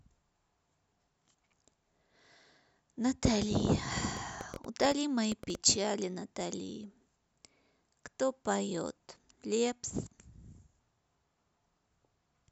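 A speech recording in which, from 4.17 to 5.56 s, a train of clicks ticks over the sound at an uneven pace of about 8 per second, roughly ten sharp pops peaking about 5 dB above the speech, most likely from electrical interference or a faulty connection or power supply.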